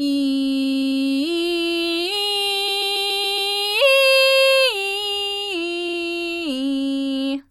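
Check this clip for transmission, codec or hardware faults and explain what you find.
The music stutters three times from repeated frames. At 0.63–1.00 s a 93 ms block replays four extra times. At 2.67–3.51 s a 139 ms block replays six times. At 5.88–5.97 s a 46 ms block replays twice. Compressed frames were resent, so the decoder loops them.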